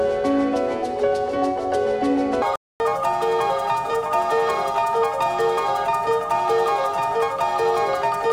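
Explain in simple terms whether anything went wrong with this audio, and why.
From 2.42 seconds to the end, part of the audio was most likely played back on the wrong clock, a fault called a section at the wrong speed. It runs 1.64 times faster than it was recorded. Because speed and pitch are tied together, the sound jumps at that moment to become both hurried and higher, by about ten semitones, and stays that way until the clip finishes.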